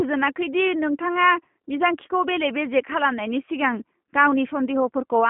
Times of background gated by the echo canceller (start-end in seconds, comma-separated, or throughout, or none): none